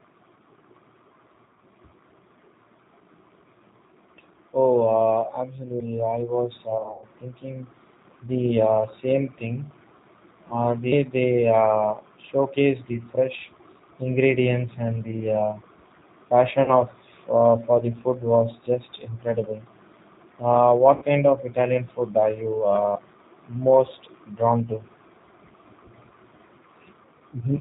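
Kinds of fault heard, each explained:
G.729 codec, throughout: the speech is carried at 8 kbit/s by the G.729A codec, which discards the waveform and rebuilds each 10 ms frame from a vocal tract filter, a pitch predictor and a handful of pulses. Nothing above 4 kHz survives, so the sound is dull and boxy, and the coarse pulse modelling gives it a plainly audible rough, synthetic edge.
VoIP packet loss concealed by the speech codec, at 6.78 to 7.05 s, 10.48 s, 16.64 to 16.73 s and 20.96 to 21.05 s: the decoder fills missing packets by extending its last pitch and filter at falling gain, producing a brief buzzy, fading smear. The worst is just after "I was", where about 180 ms is lost across 240 ms in runs up to 100 ms. The others, before "uh for the food" and "kind of", last 20 to 60 ms.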